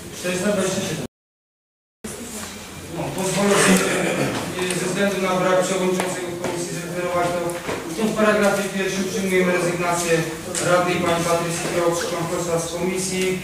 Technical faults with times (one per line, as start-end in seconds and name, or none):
1.06-2.04 audio dropout to silence